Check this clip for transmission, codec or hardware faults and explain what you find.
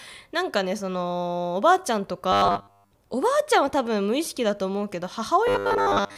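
Two stretches of robotic sound from repeated short buffers affect this speech, from 2.32 to 2.91 s and from 5.47 s to the end of the clip. The likely cause is audio arriving too seldom, so playback loops the last 10 ms or so while most of the real signal is skipped. That imposes a rigid, metallic 100 Hz buzz that still loosely tracks the speech. A spectrogram would show evenly spaced 100 Hz harmonic bands, and the waveform would show identical repeating 10 ms cycles.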